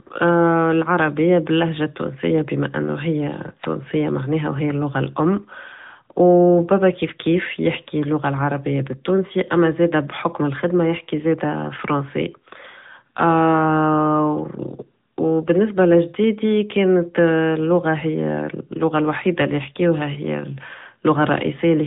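Throughout, the speech passed through the AMR narrowband mobile codec, consistent with a mid-rate mode near 10 kbps: nothing above 3.8 kHz survives, leaving plainly audible buzzy, synthetic-sounding speech.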